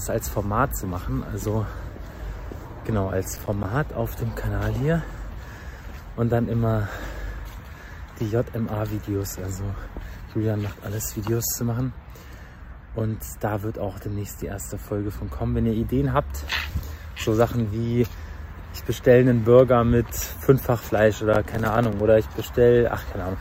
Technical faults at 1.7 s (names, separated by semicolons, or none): none